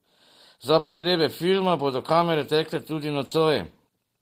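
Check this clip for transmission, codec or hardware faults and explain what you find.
Two transmission faults are present in this speech clip.

From 0.78 to 1.04 s, the last sound is stretched into a fading buzz or hiss for about 250 ms, then speech resumes with that stretch missing, likely a long network dropout.

From 3.25 to 3.32 s, a burst of packet loss removes about 60 ms. The receiver holds and fades the preceding sound before speech continues past the gap.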